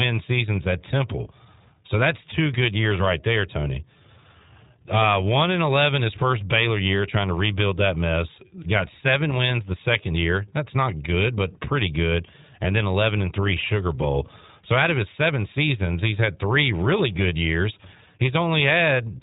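From start to finish the speech carries iLBC codec damage: nothing above 3.8 kHz, rough synthetic texture from 20 ms frames coded independently, unlike smeared, warbling perceptual codecs.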